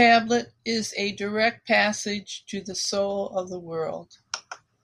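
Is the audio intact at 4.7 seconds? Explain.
No. At 4.7 seconds the speech is still carrying clock slip clicks, which run from about 0.12 s to 4.8 s. They come as faint ticks roughly every 70 ms. The likely cause is two free-running clocks differing by roughly 300 parts per million, so a single sample is dropped or repeated each time the drift adds up. Unlike random crackle or dropouts, these ticks keep a steady rhythm and vanish in pauses.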